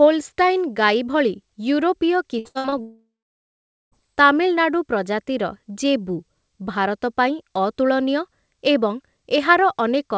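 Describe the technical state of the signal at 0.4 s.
At 0.4 s the audio is intact, with the speech passing cleanly through the WebRTC call path, whose band stops at 8 kHz, consistent with a wideband G.722 link.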